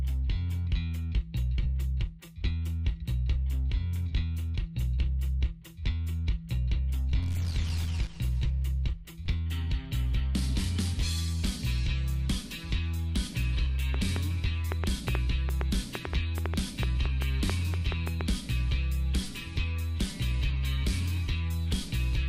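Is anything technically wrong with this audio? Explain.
Yes. From 13.94 s to 18.22 s there is a train of clicks: roughly twenty sharp pops at about 4.9 per second, unevenly spaced, standing around 15 dB above the sound. The likely cause is repeated pulses from nearby interfering equipment, a faulty connection or a power supply.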